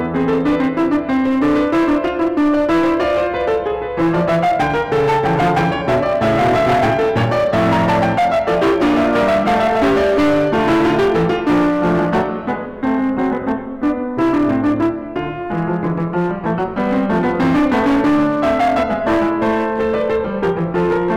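Hard clipping runs through the whole piece of music: it's overdriven by about 14 dB, so roughly a fifth of the samples hit the ceiling, and every loud passage turns to harsh, flat-topped fuzz.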